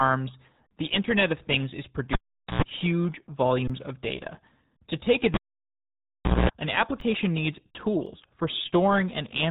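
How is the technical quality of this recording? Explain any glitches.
The technical quality is poor: heavy low-bitrate codec damage throughout, two cable disconnections and three brief output dropouts.

The whole recording passes through the RealAudio 14.4 codec, an 8 kbit/s speech coder built for dial-up links. It discards everything above about 3.9 kHz, so the speech sounds muffled and gargly, with heavy coding damage.

A cable is pulled and plugged in twice, from 2.13 to 2.62 s and from 5.34 to 6.50 s. Each event opens with a pop and drops to near silence for about 0.44 s and then 1.1 s. A 60 Hz mains buzz follows, lasting 110 ms and then 225 ms, while only the plug tip makes contact. A second pop marks the return of the audio.

An underrun with held sample occurs at 3.68 to 3.70 s, just before "of data", and again at 7.00 s and 8.06 s. Each time the output buffer empties and the converter holds its last value, so the waveform goes flat for about 21, 11 and 5 ms. 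These lengths fit buffers of 1024, 512 and 256 samples. A comparable span of audio is skipped each time.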